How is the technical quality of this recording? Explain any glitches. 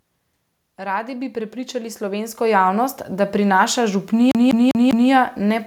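Two clear faults affect the recording: a slow, unnatural swell in level and a mechanical stutter near the end.

From 0.77 s to 4.11 s, the speech and the background noise grow louder together, rising by about 13 dB. This is automatic gain rising: an automatic gain control judged the input too quiet and steadily pushed its gain up, lifting everything it received rather than just the voice.

From 4.31 s to 5.11 s, the audio stutters rapidly and evenly, replaying the same 0.2 s fragment four times with a brief dropout at each restart. This is a CD stuck on one turn: a scratch kicks the laser back one track at the same point of every revolution, so the player keeps looping that short stretch.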